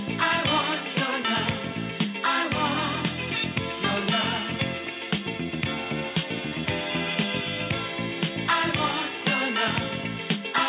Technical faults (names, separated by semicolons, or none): none